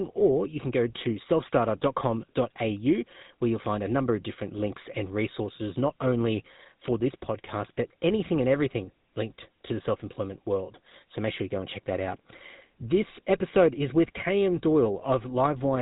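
Throughout, the speech carries GSM full-rate codec damage, plainly audible. Pulse-driven vocal-tract modelling, consistent with 13 kbps, leaves a buzzy, gravelly roughness. Nothing passes above 3.8 kHz.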